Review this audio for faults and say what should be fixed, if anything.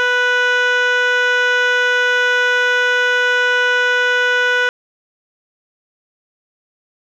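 At 4.69 s the music just stops dead and stays silent right to the end, with no room tone underneath. That's an audio dropout to silence, likely the input going missing while the recorder kept writing silence. Worth checking the cabling and input monitoring, and watching meters through the whole take so a lost feed gets caught straight away.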